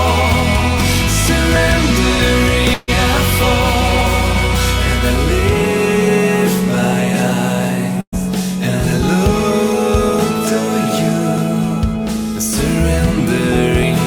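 At 2.73 to 2.90 s there is a burst of packet loss: about 140 ms of audio never arrived in time, and the receiver bridged the gap by extending the last sound while turning it down, so a smeared, fading tail is heard before the sound jumps forward. At 4.01 and 6.47 s short skips occur where audio is missing between chunks; each drops around 50 ms, and the two sides are butted together with no silence. A second burst of packet loss at 8.01 to 8.14 s removes about 120 ms; here the concealment fades out and leaves roughly 60 ms of silence before playback resumes. The skips return at 11.38 and 13.83 s. All four skips fall at 2.5 s multiples in the recording chain's timing, which points to a processor likely losing a piece each time it closes one 2.5 s block and opens the next.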